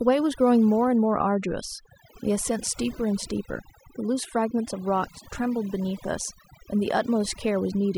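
From start to finish the speech carries overdone noise removal. The noise reduction was set too aggressively, so individual frequency bands that sit close to its noise estimate are pulled right down or switched off, and the quieter components of the voice are stripped out along with the noise. The gaps between phrases drop to near silence dotted with twinkling, chirpy specks.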